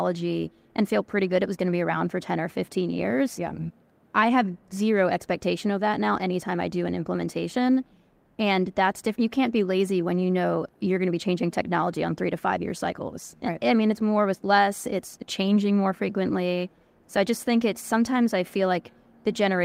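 No technical faults can be heard anywhere in this speech recording, and the signal holds steady throughout with nothing in it that points to a problem in capture, processing or transmission.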